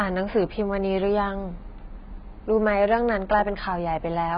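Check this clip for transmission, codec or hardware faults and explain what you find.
One codec fault runs through the whole clip. The audio was likely squeezed through AAC compression at a very low bitrate, something in the region of 16 kbps. With so few bits per frame, the encoder throws away the upper spectrum entirely, leaving nothing above 5 kHz, and quantises what remains coarsely. The speech sounds dull and muffled, with sibilants blunted and a smeared, warbling texture on sustained sounds, a sign of heavy codec damage.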